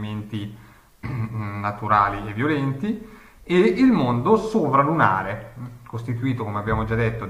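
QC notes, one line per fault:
No faults detected.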